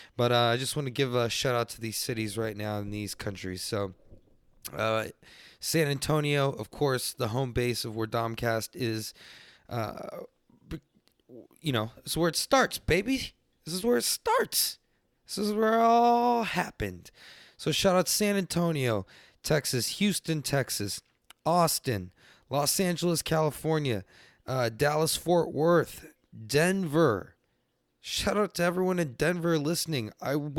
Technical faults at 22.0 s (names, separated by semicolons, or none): none